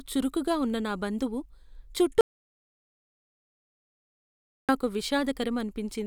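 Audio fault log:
2.21–4.69 s, audio dropout to silence: the speech cuts off abruptly and returns mid-flow after about 2.48 s of silence, with no room tone or hiss, unlike a natural pause. The input was likely lost while recording continued writing zeros.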